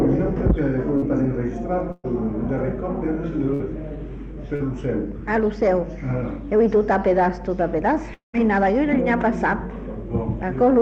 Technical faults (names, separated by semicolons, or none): short concealed packet loss; burst of packet loss; long network dropout